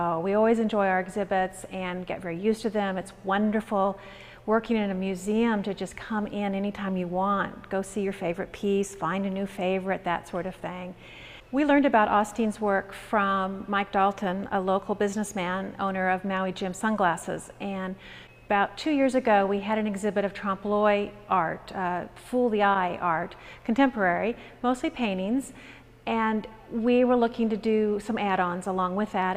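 No technical faults can be heard anywhere in the audio; the signal stays steady and intact throughout.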